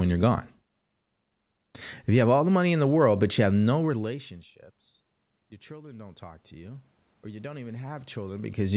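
At 5.66 s, just after "have no relationships your", automatic gain rising begins. The level reaching the microphone falls by about 24 dB, and the gain control reacts by slowly turning itself up. It adds about 11 dB by 8.62 s. The climb is gradual, spread over roughly three seconds. Voice and room noise swell together, so the background noise grows along with the speech. The boost only partly offsets the drop.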